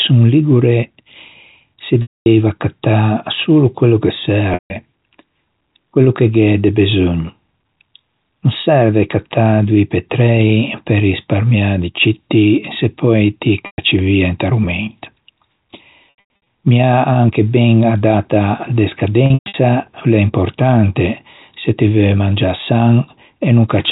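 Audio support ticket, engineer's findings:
Packet loss with pitch repetition at 2.02, 4.54, 13.66, 16.1 and 19.26 s (last after "ben a data de"). Gaps of 240, 160, 120, 260 and 220 ms; the last two are scattered bursts. The jitter buffer or decoder concealment loops the last pitch period. The result is a held, buzzy tone that fades into silence in longer gaps, with a short cross-fade as speech returns.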